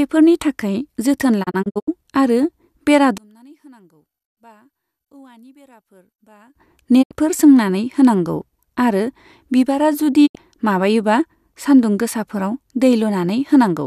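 Around 1.42 to 1.89 s there's a digital broadcast dropout. The receiver mutes in several short holes totalling about 192 ms, each with a quick 20 ms fade, which fits roughly eight lost frames. Shorter 72 ms gaps follow at 7.01 and 10.25 s. From 3.18 to 6.55 s the sound collapses by about 31 dB to a faint residue, likely one channel inverted, so the centred content cancels.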